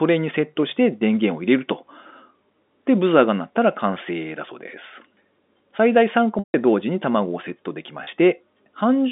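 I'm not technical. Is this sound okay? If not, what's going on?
No, there are two short glitches from packet loss with pitch repetition. Bits of the audio went missing in transit, and the receiving end patched each gap by replaying the last tiny slice of the sound and fading it out. At 6.39 to 6.54 s about 150 ms dropped out, long enough that the patch sounds like a brief buzzy hold before going quiet. At 8.04 to 8.07 s a much shorter gap gives just a quick held blip. The rest is ordinary phone-line sound.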